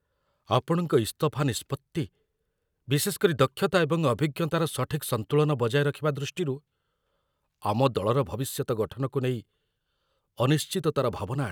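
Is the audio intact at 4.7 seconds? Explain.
Yes, the audio is intact at 4.7 seconds, with no audible fault at that moment.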